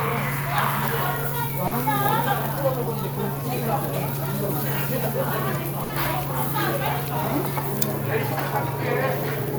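A recording of general sound, not speech, carrying two packet-loss faults from a network transmission. The first is a short concealed packet loss at 1.67 to 1.73 s. About 40 ms of audio did not reach the decoder in time, and the receiver patched the hole by extending the preceding sound before crossfading back into the real signal. It comes across as a brief smear or wobble where the material should have continued cleanly, with whatever occupied those 40 ms gone. The second is a burst of packet loss at 5.83 to 5.91 s, a longer run of data lost or arriving too late to be played. The receiver filled roughly 60 ms by continuing the last sound and pulling its level down as the gap went on, producing a short held tone or fading hiss rather than the actual content. Playback then resumes further along, with those 60 ms of the original audio missing.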